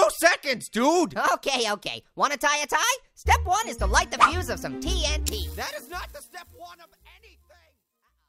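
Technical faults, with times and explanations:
No technical faults are heard, so there are no times or explanations to give.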